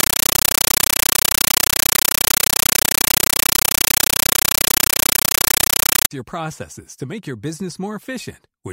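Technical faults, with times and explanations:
0.00–6.11 s, compressed stream played as audio: an undecoded Dolby Digital stream was taken as samples, giving loud chattering static (9.33 ms noise bursts, 31.25 per second) until "your processes to make".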